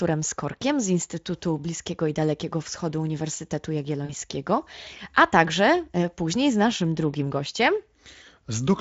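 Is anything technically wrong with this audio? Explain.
Yes, there is one short glitch in the speech. From 4.05 to 4.14 s, VoIP packet loss concealed by the speech codec: about 40 ms of audio, which fits two lost 20 ms frames, was extrapolated from the preceding pitch and filter. It sounds like a brief buzzy tone or coloured noise that fades, with the voice weak or distorted just afterward. On a waveform the amplitude decays across that gap. On a spectrogram the harmonics continue flat and repetitive before thinning. The Speex coding heard throughout causes only light damage.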